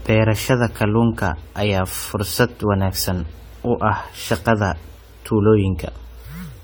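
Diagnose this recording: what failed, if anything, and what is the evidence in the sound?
The fault sits in the codec stage, and it runs through the whole speech clip. The sound is swirly, smeared and hollow. Consonant attacks blur rather than snap. Content still reaches 20 kHz, so this is not simple band-limiting. The likely cause is generation loss: repeated lossy re-encoding, around ten passes, which fits a 64 kbit/s AAC-LC chain. Each pass quantises on a shifted frame grid. Noise and spectral holes stack up with every generation.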